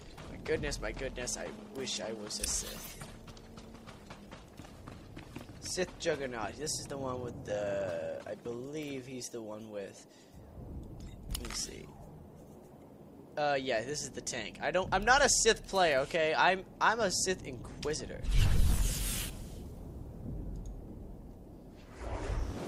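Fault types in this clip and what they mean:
Adaptive stream at a lower bitrate: from 1.12 s to 13.12 s the player fell back to a leaner encoding as the connection slowed, so codec artefacts grow stronger, fitting a drop from 64 to 24 kbit/s Opus; both switches are abrupt, without gaps.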